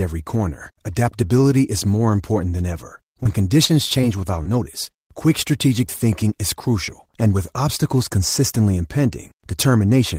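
Five spots of short concealed packet loss turn up in this speech: at 3.23 s right after "more important than ever", then 3.65, 4.43, 4.85 s just before "quick strategic", and 5.87 s just before "is crucial and with". Each time 20 to 40 ms of audio arrived too late, and the receiver bridged it by extending the preceding sound before blending back in, so you get a quick smear or wobble rather than a clean gap.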